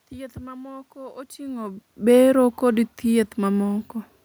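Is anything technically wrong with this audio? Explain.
No, nothing technically wrong.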